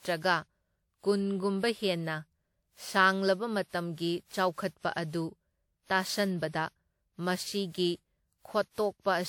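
Speech with generation loss throughout: it sounds swirly, hollow and smeared, with blurred consonant attacks. On a spectrogram, flickering holes pock the upper bands and the content stops near 19.9 kHz. The likely cause is repeated WMA re-encoding, about seven passes, at what sounds like 96 kbit/s.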